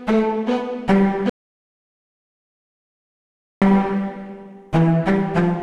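At 1.30 s the sound just stops dead, and it doesn't come back until 3.62 s, so roughly 2.3 s is missing. That's an audio dropout to silence: the gap is silent, with no room tone or noise floor at all, and both edges are abrupt, mid-flow cuts. The likely cause is the input signal being lost for a moment, maybe a device dropping off or a link failing, while the recorder kept writing silence.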